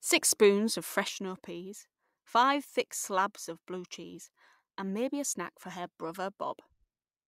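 At 1.09 s, right after "spoons of", the speech drops abruptly by about 6 dB and stays down to the end. That step is consistent with one stereo channel dropping out, likely, so the mono sum carries only the surviving side.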